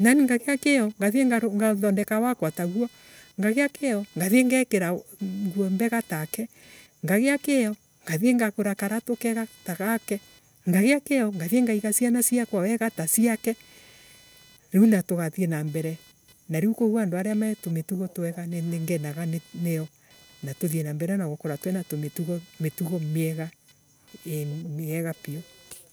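From start to finish, computer activity noise sits under the speech: a buzzing, chirping whine pulsing at around 500 Hz, roughly 30 dB below the voice. Shifting load on the computer's processor, graphics hardware or mouse is disturbing the ground shared with the audio circuitry. Unlike steady mains hum at 50 or 60 Hz, this noise flickers and changes character with the machine's workload, not with the speech, and it persists through the pauses.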